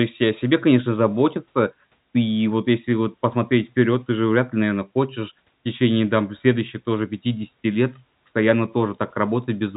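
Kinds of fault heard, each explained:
Nothing here counts as a fault; the speech just carries the usual narrow telephone-line sound, with nothing getting through above about 3.8 kHz.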